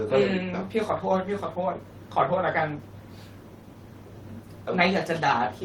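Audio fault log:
Nothing to log here; the speech comes through without any fault to report.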